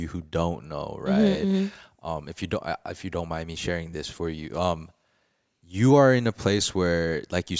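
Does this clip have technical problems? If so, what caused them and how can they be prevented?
No, this clip has no technical problems, so there is nothing that caused them and nothing to prevent.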